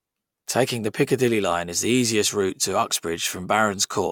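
Speech recording, no faults heard.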